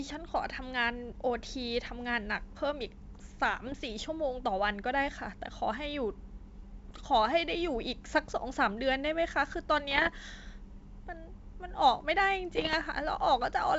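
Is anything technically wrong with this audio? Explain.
Yes. Bit errors on an ADPCM link, likely a G.722 wideband call, hit four times: 3.66–3.81 s, 6.89–7.03 s, 9.90–10.17 s and 12.56–12.75 s. Flipped bits upset the decoder's step size and predictor, so each error rings on. You hear pops, rough bursts and brief level jumps.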